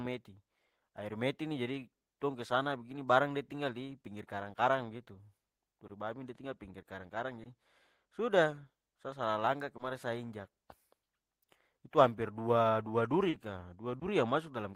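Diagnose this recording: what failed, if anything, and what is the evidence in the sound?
Brief smears and wobbles break into the speech at 5.87–5.91 s, 7.43–7.47 s, 9.77–9.81 s, 13.29–13.35 s and 13.99–14.03 s, the fourth longer. This is short concealed packet loss at the network stage. Packets carrying 20 ms of audio, 40 ms in the fourth case, failed to arrive in time. The decoder extrapolated the preceding sound across each gap and then crossfaded back into the real signal.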